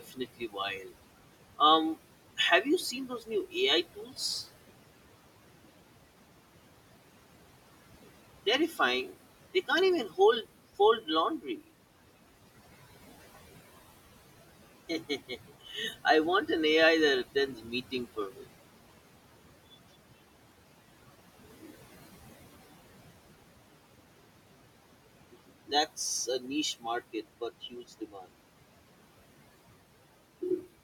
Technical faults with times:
0.00-30.83 channel delay (comb filtering)
0.00-30.83 noise suppressor artifacts
0.00-4.18 speech cut by the noise suppressor
8.46-11.71 speech cut by the noise suppressor
14.89-16.49 speech cut by the noise suppressor
17.55-18.48 speech cut by the noise suppressor
25.33-28.29 speech cut by the noise suppressor

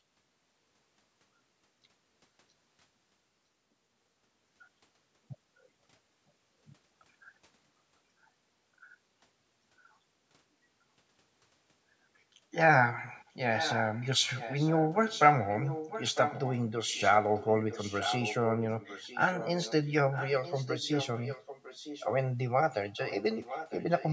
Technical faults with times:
13.54-14.07 echo leak
14.35-16.63 echo leak
16.93-19.73 echo leak
20.12-22.10 echo leak
22.96-24.12 echo leak

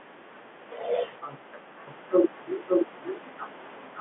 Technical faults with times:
1.87-4.01 doubled audio track

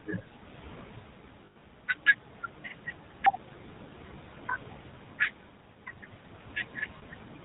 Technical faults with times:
0.00-7.45 noise suppressor artifacts
0.00-7.45 GSM full-rate codec
1.46-1.63 lost GSM frames
6.98-7.04 lost GSM frames

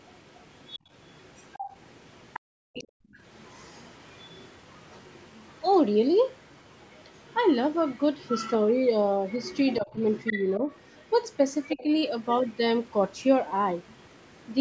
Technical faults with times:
0.00-5.46 other side's voice leaking through
2.40-3.17 background gated by the echo canceller
6.69-8.53 other side's voice leaking through
9.28-12.52 other side's voice leaking through
9.80-9.95 speech suppressed in double talk
11.75-11.85 speech suppressed in double talk
13.87-14.36 other side's voice leaking through

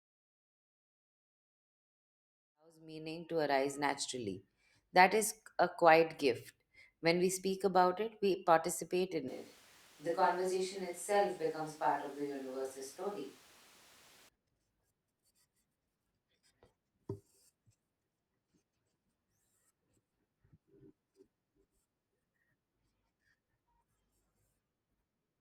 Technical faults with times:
9.28-14.28 switch to a distant microphone

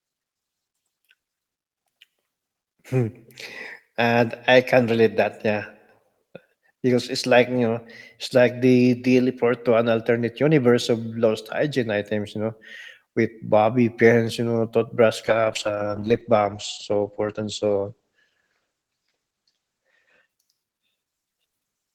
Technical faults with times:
15.27-20.35 call bitrate drop

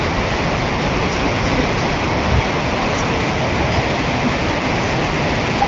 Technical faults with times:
none

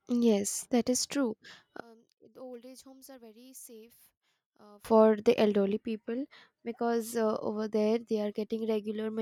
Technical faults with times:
1.80-4.85 one channel inverted

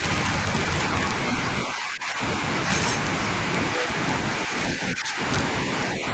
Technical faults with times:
0.00-6.13 integer overflow
1.66-2.21 speech suppressed in double talk
4.75-5.19 speech suppressed in double talk

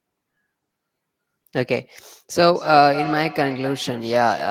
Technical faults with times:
2.55-4.50 feedback echo between two devices

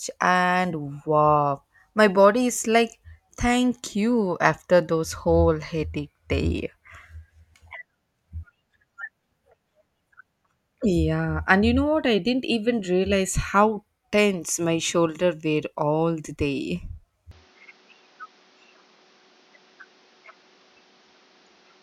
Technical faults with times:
17.31-21.82 input switched to a poorer device

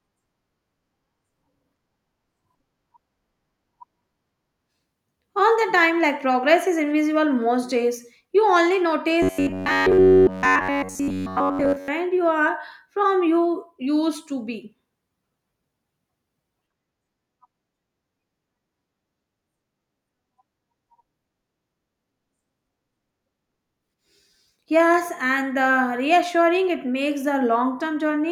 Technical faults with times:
9.22-11.88 robotic sound from repeated short buffers

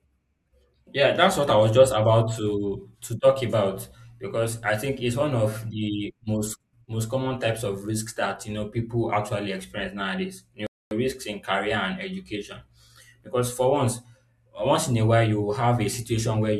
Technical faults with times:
10.67-10.91 rebuffering stall

